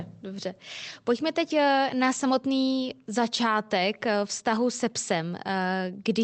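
No faults are audible in the speech; the call path's codec band-limits it to around 8 kHz, which fits an Opus stream.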